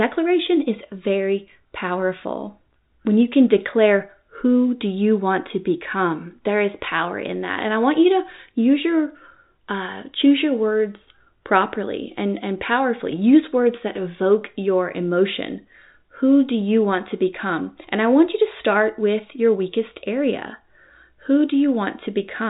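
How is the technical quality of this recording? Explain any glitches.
No glitches can be heard anywhere in this recording.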